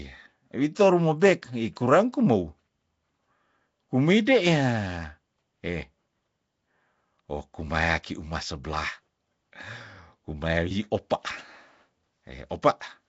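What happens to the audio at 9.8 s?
At 9.8 s the speech carries the same codec damage heard across the entire clip rather than a separate event. It is rough and hissy, with a smeared, underwater quality, and nothing above 7.7 kHz. The likely cause is Nellymoser compression, the old Flash microphone codec, at a rate that sounds like 32 kbps. It codes short fixed blocks with very few bits, so weak bands receive none and are filled with noise.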